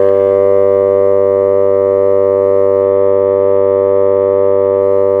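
Music. From 2.82 to 4.81 s, a Bluetooth SBC bit pool drop dulls the treble and adds gritty noise. The sound fits a bit pool near 8.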